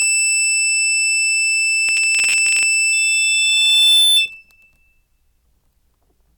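From 1.88 to 2.74 s the music breaks into processor overload crackle: the processing could not keep up with its small buffers, which sound to be around 10 ms each, and many deadlines slipped in succession. Each missed block was simply skipped, leaving a hard-edged hole, and dozens of them strung together produce a gritty, tearing crackle over the music that stops once the load clears.

At 2.92 s a loudspeaker feedback squeal begins, lasting until 4.30 s. A microphone is picking up the loudspeaker it drives, and at 3.5 kHz the loop gain has gone above one, so that frequency feeds on itself. The tone swells over roughly a second into a piercing whistle that ends up about 5 dB above the music before it cuts off.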